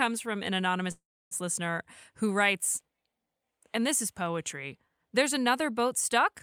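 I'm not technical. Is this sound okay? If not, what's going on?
No. There is a call audio freeze from 0.91 to 1.33 s, between "from an" and "listener who writes". The sound hangs, fades to silence for about 0.3 s, then resumes where it stopped. Nothing is lost. Delayed network data is the likely cause.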